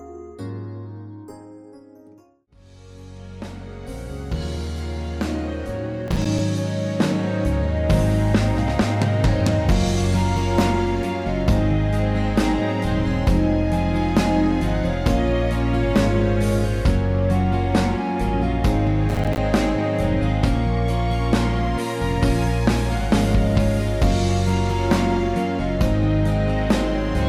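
Two bursts of processor overload crackle tear through the audio, from 6.08 to 6.39 s and from 19.09 to 19.38 s. Short hard-edged dropouts to silence, each a few milliseconds long, leave gritty crackle. This fits missed deadlines on small buffers of around 5 ms, with the second burst denser.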